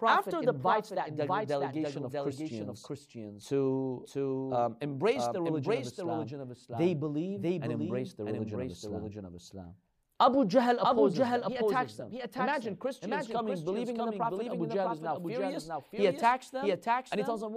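Throughout the speech, a doubled audio track runs underneath: a full-band copy trails roughly 0.7 s behind, around 5 dB quieter, with no decay or room colour. It is likely a second, slower capture path. A spectrogram shows every syllable repeated as a fainter, shifted duplicate.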